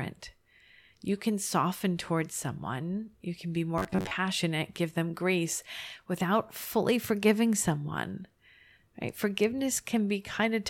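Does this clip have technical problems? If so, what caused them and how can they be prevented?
Yes. Robotic sound from repeated short buffers occurs at 3.78–4.11 s, after "someone you can be": a rigid 94 Hz buzz, likely from the same 11 ms buffer repeating through most of that stretch. A larger jitter buffer and steadier delivery prevent it.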